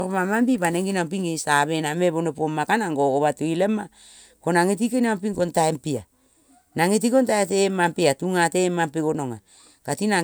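Listening to the speech in this clip, nothing stood out as a technical problem.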